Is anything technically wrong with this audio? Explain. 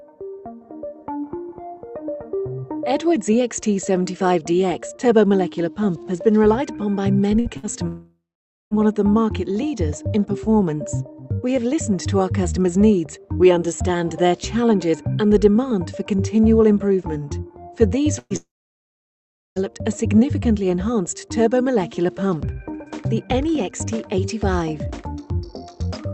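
Yes. The sound breaks up in two places, with short bursts of packet loss and long network dropouts clustered around 7 to 9 s and 18 to 20 s. It reaches the listener through a call path whose coding, consistent with Opus at around 48 kbps, rolls off the top end above about 8 kHz.

Burst of packet loss, at 7.39 to 7.48 s, 7.57 to 7.66 s and 18.19 to 18.33 s: each gap is a brief smeared buzz or hiss that fades, after which the audio resumes slightly further on. About 60 ms goes missing in each of the first two and about 120 ms in the third, which ends in a moment of near silence. The receiver's concealment extended the last sound across each hole and turned it down as it went.

Long network dropout, at 7.87 to 8.74 s and 18.36 to 19.59 s: the sound stretches into a fading buzz or hiss that decays to silence, about half a second of it in the first gap and about 1.1 s in the second. The audio then returns with about 0.84 s and 1.2 s of material gone. 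This is likely caused by the stream stalling entirely, so that concealment could only bridge the first fraction of each gap.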